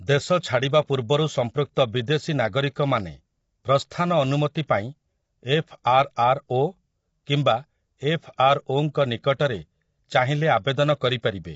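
From start to finish the speech sounds rough and grainy, with noise filling the gaps between pitch harmonics and nothing above 7.7 kHz. This is likely low-delay AAC compression (AAC-ELD): its short frames resolve harmonics poorly, and the damage fits a bitrate near 24 kbps.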